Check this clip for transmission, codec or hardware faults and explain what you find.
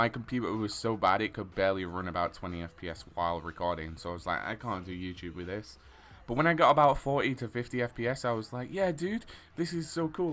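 No transmission, codec or hardware problems can be heard anywhere in this recording.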